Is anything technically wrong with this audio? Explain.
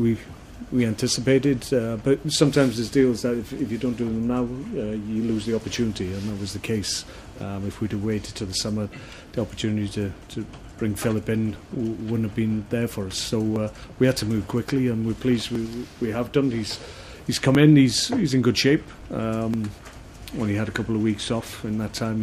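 Yes, there are periodic USB or driver dropouts running from about 1.6 s to 21.5 s, roughly ten of them, spaced every 1.99 s. Each time, something is briefly stalling the USB bus or the audio driver, and around 10 ms of audio just gets skipped, with nothing filled in. You hear it as a regular tick or small pop, clockwork-even, and only while there's actually sound playing.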